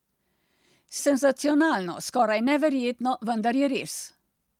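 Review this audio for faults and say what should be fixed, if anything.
At 0.99 s there is a skip ahead. About a second of speech is missing. Playback jumps forward with no gap filled, so the two sides butt together. Later audio was already queued, and the stretch between was dropped. A deeper jitter buffer would prevent it.

A jitter buffer speed-up runs from 1.56 to 2.47 s at 105%, from 3.01 to 3.71 s at 108%, and from 4.16 to 4.48 s at 114%. Each trims a few tens of milliseconds. Pitch holds, but the speech sounds hurried. Smoother packet delivery would prevent it.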